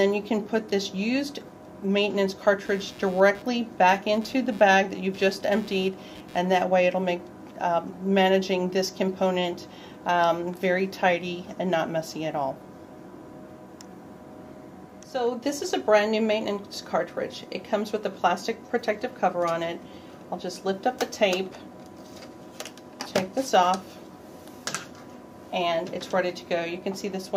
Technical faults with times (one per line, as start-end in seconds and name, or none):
2.65-6.62 computer activity noise